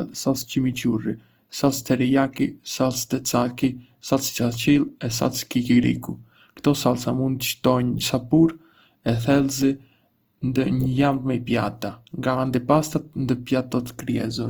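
Throughout the speech there is plainly audible grain that is likely Opus compression at a low bitrate, around 24 kbps. Voiced sounds turn rough and noisy rather than swirling as with MP3, because starved bands are filled with noise instead of left empty. Bandwidth still reaches about 20.1 kHz.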